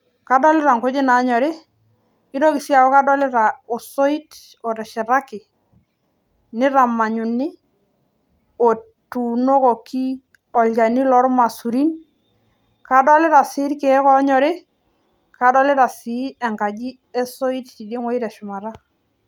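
From 10.29 to 11.73 s there are scattered short gaps: roughly seven small holes in the packet stream, none longer than about 15 ms, which the receiver patched by continuing the last sound. Around 70 ms in total is concealed, about 5% of that stretch. The speech stays clear, but these patches can be heard as brief ticks, slight smears and small hiccups spread across the span.

A jitter buffer slow-down runs from 12.54 to 13.89 s. The receiver was short of buffered audio and built up a reserve by repeating single pitch periods and fragments of pauses many times in a row, adding 90 ms. Playback drops to 94% speed while the pitch stays the same, so the speech in this section sounds slightly drawn out and sluggish.

From 16.07 to 16.95 s there is a jitter buffer speed-up. The buffer held more audio than its target, so the receiver trimmed short pieces of one or a few pitch periods in quick succession, removing roughly 100 ms. 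The speech runs at 110% speed with unchanged pitch, and this short section sounds noticeably hurried.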